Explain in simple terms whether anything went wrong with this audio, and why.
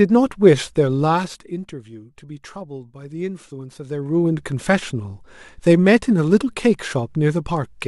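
Nothing went wrong with this speech recording, because there's no technical fault to hear anywhere in it.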